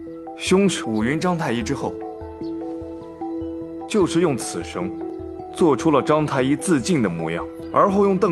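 No faults are audible; the audio carries the expected call-codec character, with the top end stopping around 12 kHz, which fits an Opus call path at a moderate bitrate.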